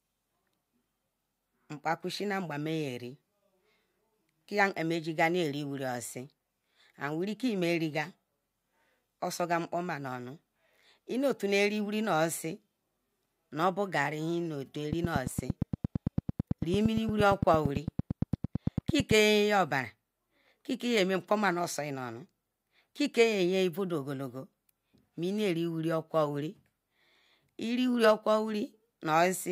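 After "tu o", from 14.93 to 19.12 s, a train of clicks ticks at 8.8 per second, likely interference. Unlike random crackle, the pulses sound alike and regularly spaced.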